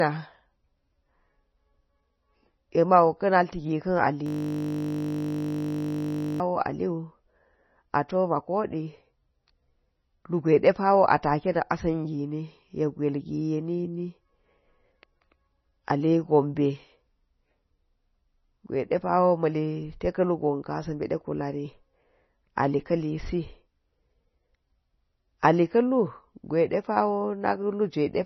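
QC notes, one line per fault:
throughout: MP3 compression, likely the cause of the dull, watery character across the whole speech clip. Nothing is heard above about 5.9 kHz, so sibilants lose their edge and sound blunted. The damage is heavy and fits a very low bitrate, around 24 kbps. Weak frequency components flicker in and out between frames, giving a swirling, underwater texture to the speech, and consonant onsets come across smeared rather than crisp.
4.26 to 6.40 s: system hang loop. For a little over two seconds the audio stops moving forward and a single 20 ms slice plays back exactly, over and over, about 107 times in a row. Because each slice is so short, the repeats merge into a steady buzz at 50 Hz, not a distinct stutter. This is what happens when the computer or driver stalls while the sound hardware keeps cycling through the same small buffer.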